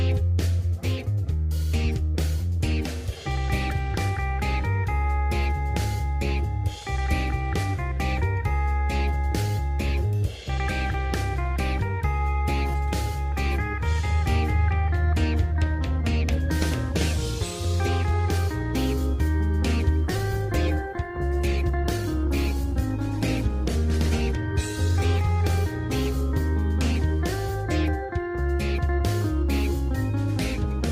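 At 20.05 s a call bitrate drop sets in and lasts until 29.09 s. The bandwidth estimate fell and the Opus encoder was made to code far more coarsely, which fits a fall from around 128 kbps to around 17 kbps, held at its lowest for about 4.2 s. The audio loses its top end and turns rough or watery, then clears by 29.09 s. Unlike packet loss, the sound stays continuous, with no gaps or stutters.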